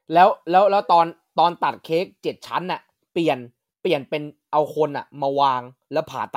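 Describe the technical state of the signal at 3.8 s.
At 3.8 s the speech signal is intact, with no audible technical fault at that moment.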